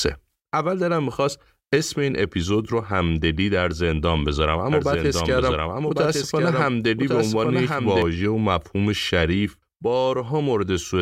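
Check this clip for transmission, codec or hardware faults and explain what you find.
One fault stands out. From 4.72 s to 8.02 s the speech is accompanied by a doubled audio track: a second, full-band copy trailing about a second behind, about 5 dB quieter, dry, starting and stopping abruptly. Likely cause: a slower second capture path mixing in.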